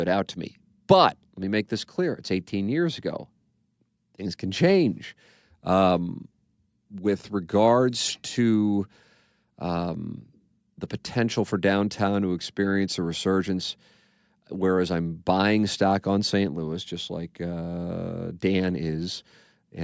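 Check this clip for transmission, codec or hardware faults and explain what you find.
No transmission, codec or hardware faults turn up in this clip, which carries the usual call microphone processing with nothing above 8 kHz.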